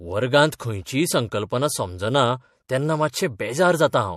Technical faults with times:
0.58-0.60 pre-echo

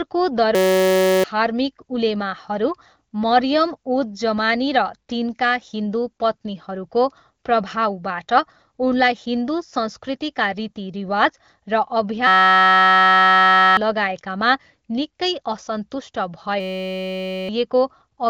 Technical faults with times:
0.55-1.24 system hang loop
12.27-13.77 system hang loop
16.60-17.49 system hang loop

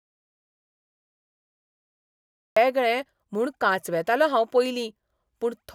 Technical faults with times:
0.00-2.56 audio dropout to silence

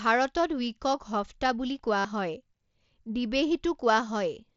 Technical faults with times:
1.99-2.05 concealed Bluetooth headset packet loss

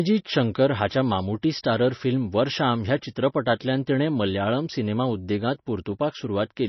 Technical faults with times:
0.00-6.69 MP3 compression

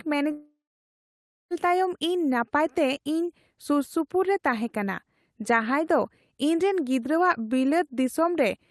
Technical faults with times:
0.31-1.53 long network dropout

